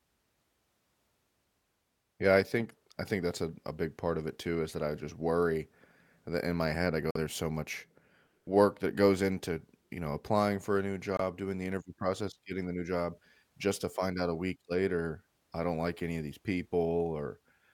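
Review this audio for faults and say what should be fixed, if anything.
Bluetooth dropout at 7.11 to 7.17 s and again at 11.17 to 11.20 s: the speech cuts to silence for about 46 ms, then about 23 ms, and resumes further along as if it had kept playing. The likely cause is wireless packets arriving too late at the headphones and being discarded; the gap lengths fit two and one lost frames. To prevent it, shorten the distance to the headphones and reduce 2.4 GHz interference.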